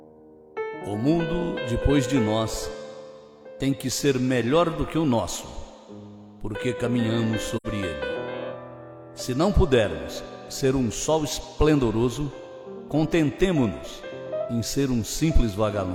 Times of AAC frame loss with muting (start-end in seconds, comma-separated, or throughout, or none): 7.56-7.66